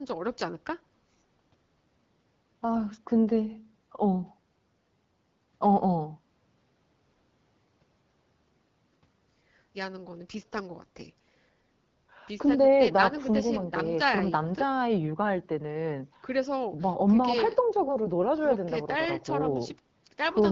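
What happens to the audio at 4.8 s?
At 4.8 s nothing goes wrong: the speech carries straight through, with only the light coloration of the AMR wideband (HD Voice) codec running at 12.65 kbit/s.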